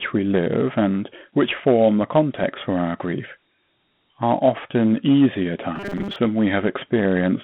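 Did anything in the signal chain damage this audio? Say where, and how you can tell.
Yes. The codec stage left Dialogic VOX ADPCM damage throughout. Nothing sounds above 4 kHz, the line band sits around 150 Hz to 3.4 kHz, and a gritty hiss rises and falls with the speech. That tracking hiss separates it from clean telephone band-limiting. The 32 kbps rate fits 4-bit samples at 8,000 a second.

From 5.76 to 6.16 s there is robotic sound from repeated short buffers, most likely a driver or buffer underrun. The speech collapses into a rigid 200 Hz buzz, which matches a segment about 5 ms long being looped. Roughly half the audio there is repeat, not new signal. The fixed pitch distinguishes it from codec grit.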